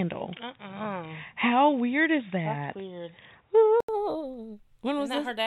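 A speech recording whose first 3.89 s sound dull and boxy, with nothing above 3.8 kHz and faint background noise. At 3.89 s an 80 ms gap of silence falls, after which the sound opens up, and the level shifts by a few decibels. This is likely an input switched to a poorer device: a narrowband microphone or headset call profile carried the opening before the system changed over to the fuller input.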